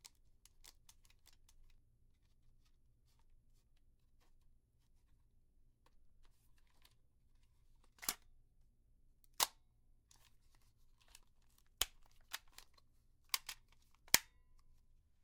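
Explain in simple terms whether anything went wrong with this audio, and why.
A doubled audio track runs from the very start of the clip until about 1.78 seconds. Each sound is heard a second time, roughly 0.7 seconds later and somewhat quieter, like a flat repeat with no room echo. It is likely that the same audio was picked up twice, with one copy arriving late through a slower route, or that an edit left two copies out of step. The repeat cuts off abruptly at 1.78 seconds.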